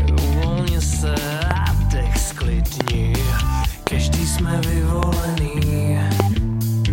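Loud pops occur at 1.51–1.53 s, 2.81–2.90 s, 3.87–3.89 s, 5.03–5.05 s and 6.20–6.22 s. The one at 2.81 s is a double pop. Each is a sharp pulse, about 15 to 20 dB above the sound, which continues underneath. The likely cause is a voltage spike from a switch, static or a driver glitch.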